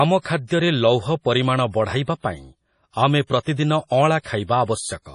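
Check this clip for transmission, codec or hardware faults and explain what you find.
Two codec faults are present in this speech clip.

Throughout, nothing is heard above 10.5 kHz, and weak detail swirls and flickers between frames. This is likely heavy MP3 compression; the damage fits a bitrate around 32 kbps.

From 3.41 to 3.46 s, a hiss lasting about 53 ms leads an attack. This is pre-echo: the block's quantisation noise spreads backward into the quiet before the onset, softening it.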